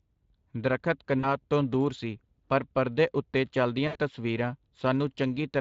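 Speex codec damage runs throughout: the CELP coder's limited excitation bits leave the speech hoarse and grainy, a sound that points to a mid-range setting near 20 kbps.

VoIP packet loss concealed by the speech codec occurs at 1.19 s, just before "ਤੋਂ ਦੂਰ ਸੀ ਪਰ", and at 3.87 s, right after "ਸੀ ਪਰ ਪਰਦੇ ਉਤੇ". The decoder stretches its last pitch into a fading buzz or coloured noise, about 40 ms and then 80 ms, which fits two and four missing 20 ms frames.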